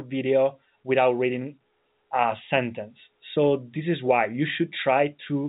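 Nothing stood out on listening to this speech, which carries the narrow band of G.711 telephone coding.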